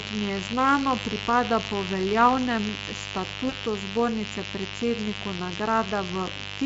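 A steady, raspy buzz runs under the speech for the whole clip, only about 10 dB below it. This is mains buzz: switching spikes, twice in every cycle of the 50 Hz mains, leak in, with harmonics reaching into the kilohertz range. From 3.49 to 3.55 s, just before "zbornice predsedniku", the speech is briefly stretched and fades, and stays weak for a moment afterward. This is VoIP packet loss concealed by the speech codec. The Speex decoder extrapolated across the gap, which fits a single lost 20 ms frame.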